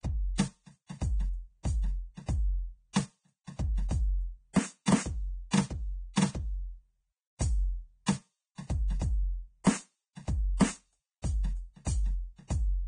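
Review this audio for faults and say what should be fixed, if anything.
A very low-bitrate encode, likely Vorbis compression and consistent with roughly 20 kbps, cuts everything above 9.7 kHz and turns the treble into grainy hiss throughout this music. Pre-echo from 9.64 to 9.66 s: the codec spreads quantisation noise across its block, so a short hiss smears about 26 ms ahead of an attack. Encoding at a much higher bitrate, with shorter transform blocks around sharp attacks, would prevent both faults.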